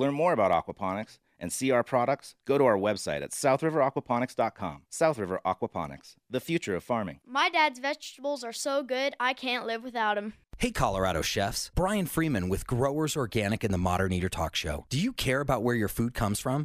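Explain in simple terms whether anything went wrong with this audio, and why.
CD scratch ticks appear from 0.53 to 1.05 s, just after "more about" and before "and see our products": four tiny clicks, the longest about a millisecond long. A scratch ruined data on each disc turn, and the player patched over the gaps.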